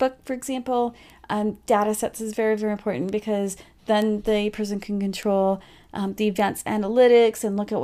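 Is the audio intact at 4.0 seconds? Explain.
No. At 4.02 s a single sample carries a bit error spike: one bit flipped in memory or on the digital link, throwing that value off by a power of two before the next sample returns to normal. It peaks near about −10 dBFS and sounds as one sharp, broadband tick.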